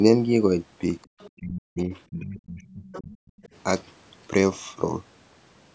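A faint second voice first appears from 1.02 to 1.30 s. This is the other side's voice leaking through, sitting roughly 25 dB under the main speech. The likely cause is that the talker's loudspeaker output reaches the microphone and the echo canceller leaves a residue. It returns briefly at 1.94 s, again from 2.64 to 3.01 s at about 20 dB down, and from 3.27 to 3.48 s, fainter at around 30 dB down. It differs from background chatter because it arrives in scraps.

Around these scraps, from 1.33 to 1.91 s and from 2.08 to 3.24 s, the main speech itself dips sharply by as much as about 40 dB, for roughly half a second and then a full second in total. This is speech suppressed in double talk: the canceller, likely unable to separate the talker from the echo while both sides speak, turns everything down. The second dip overlaps the leaking voice, and that distinguishes it from ordinary network dropouts. 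The call's microphone path carries nothing above 8 kHz.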